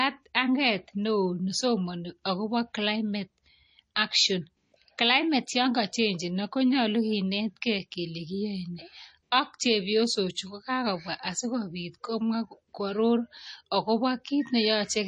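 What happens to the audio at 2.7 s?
At 2.7 s the speech carries the same damage as the rest of the clip, likely from MP3 compression at a low rate, around 32 kbps. The starved encoder drops weak frequency lines frame to frame and cuts everything above 10.6 kHz, leaving a dull, watery, swirling sound.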